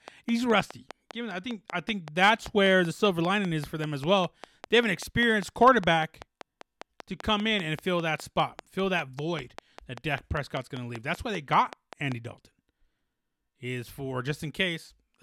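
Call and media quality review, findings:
Train of clicks, 0.08 to 12.13 s: regular ticking at 5.07 per second, some seventy in all, peaking about 10 dB above the speech and audible in pauses. Likely external interference or a struggling interface injecting near-identical pulses. Waveform: evenly spaced spikes. Spectrogram: thin full-band vertical lines at fixed spacing.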